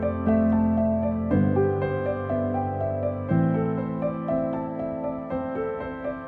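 Nothing in the recording stood out as a technical fault on listening.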